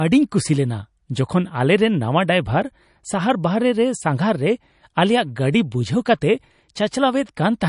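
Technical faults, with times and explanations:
Throughout, MP3 compression: the speech has a watery, swirly sheen, smeared onsets and nothing above 10.6 kHz, likely from encoding near 40 kbps, where the encoder cuts treble and zeroes weak lines; a spectrogram shows a flat ceiling with flickering gaps.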